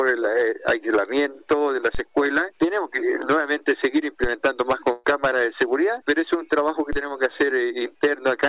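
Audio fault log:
4.92–5.06 s, burst of packet loss: the last sound is held and fades for about 120 ms, then jumps ahead. A run of lost packets left the receiver stretching and attenuating the last audio it had, so about 120 ms never arrives.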